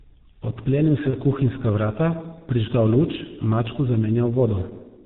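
From start to finish the speech passes through the G.723.1 codec, squeezed at what sounds like its 6.3 kbit/s rate into 30 ms frames with nothing above 4 kHz. The heavy damage is clear: a muffled, hoarse voice with smeared consonants.

From 1.10 to 1.16 s, VoIP packet loss is concealed by the speech codec. About 30 ms of audio, which fits a single lost frame, is rebuilt from the previous pitch and filter, giving a brief buzzy, fading smear before "kuhinjska vrata prižgal luč" returns.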